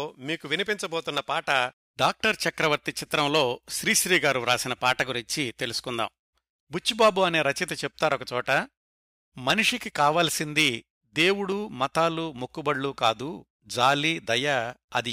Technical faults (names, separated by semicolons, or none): dropped samples